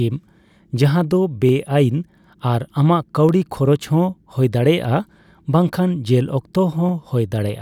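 From 0.29 s to 7.49 s there's a click about every 0.6 s through the speech. That's the signature of clock drift buffer slips, likely two devices whose clocks disagree by something like 700 ppm, so the buffer drops or repeats roughly 15 samples at each slip.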